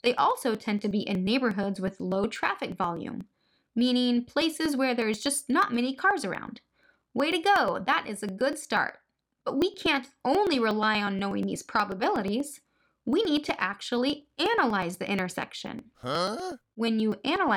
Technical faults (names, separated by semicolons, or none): periodic USB or driver dropouts